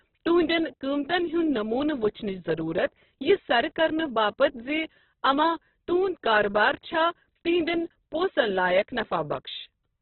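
Throughout, the speech sounds rough, grainy and boxy, with nothing above 4.1 kHz and tones turning into noisy texture rather than swirling. The likely cause is heavy Opus compression in its CELT music mode, squeezed to narrowband, which fits a bitrate near 8 kbps.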